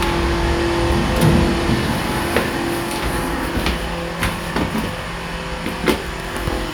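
The clip is a recording of sounds, and nothing technically wrong can be heard anywhere in it. There are no audible faults to report, so no times or causes apply.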